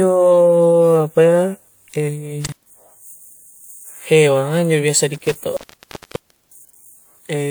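At 2.47 s and again at 5.14 s, the speech cuts out through intermittent contact, a loose connection briefly opening. Gaps last about 95 ms and 950 ms, with crackle at each edge.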